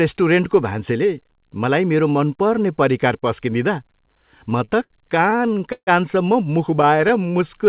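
At 4.65 to 4.70 s, and again at 4.84 to 4.92 s, there is a short stall from a late packet. A packet did not arrive in time, the jitter buffer ran dry, and the receiver held the last sound for about 28 ms and then about 64 ms before carrying on from the same point. Nothing is lost. Instead, a sound hangs slightly too long with a slight buzz or dip. On a spectrogram the harmonics freeze into flat horizontal bands, and the waveform shows one cycle repeated.

From 5.30 to 5.89 s the speech stutters through six repeated stalls (a stutter) as packets keep arriving late. About 208 ms is filled in, roughly a third of that stretch, and the longest hold is about 148 ms. The longer holds fade. The effect is a dragging, halting rhythm. A spectrogram shows a series of smeared, static patches, the longer ones dimming, in place of the normal changing detail.

A milder stutter runs from 6.71 to 7.18 s. 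It has five brief holds, none over 12 ms and about 39 ms in total. Overlapping it, from 6.85 to 7.65 s, is a jitter buffer slow-down. The buffer rebuilt its reserve by repeating single pitch periods, adding about 74 ms, so the audio plays at about 91% speed with the pitch unchanged. Sounds are drawn out. The waveform shows identical cycles in a row, and the spectrogram shows stretched harmonics. Throughout, nothing appears above 4 kHz, which fits a G.711-type narrowband call path at 64 kbps.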